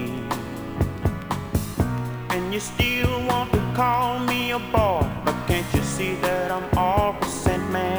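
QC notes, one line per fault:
Throughout, crude rate conversion: samples repeated instead of filtered, fitting a 32 kHz to 48 kHz step, leaving gritty inharmonic fizz roughly 25 dB below the sound.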